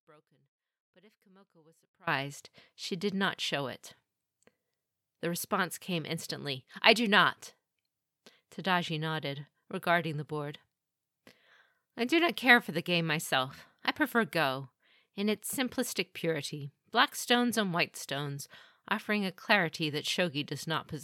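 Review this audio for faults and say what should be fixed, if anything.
An audio dropout to a faint residue runs from the very start of the clip to 2.07 s. The speech is already missing when playback begins and then cuts in abruptly, rather than fading up. Throughout the gap only a faint trace of the sound remains, roughly 30 dB below its normal level. This is likely a lost connection or a muted stage upstream while the downstream path stayed live and kept passing leakage. To prevent it, confirm the source is connected and passing full-level signal before recording starts.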